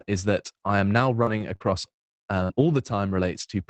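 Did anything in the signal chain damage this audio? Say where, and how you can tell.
Yes, at the network stage of the Opus call path. Between 1.23 and 1.93 s, repeated packet loss causes a choppy, robotic stretch: four short gaps, the longest 45 ms, each patched by extending the previous sound.

A burst of packet loss at 2.43 to 2.51 s leaves one 60 ms hole, heard as the last sound held and fading away rather than repeated chopping, before the sound resumes further on.

Lost packets rebuilt from error correction at 2.49 to 2.51, 2.73 to 2.75, 2.85 to 2.87 and 3.13 to 3.15 s sound briefly rougher and noisier but continuous, with nothing missing.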